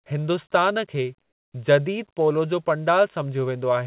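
From 1.22 to 1.54 s, during a pause in the speech, the background drops by about 8 dB and turns into a smooth, textureless hiss for roughly a third of a second before the speech resumes. This is likely comfort noise in place of the background: the sending side stopped transmitting during the silence, and the receiver filled the 320 ms gap with synthetic noise approximating the room. Throughout the call path, nothing reaches above 4 kHz.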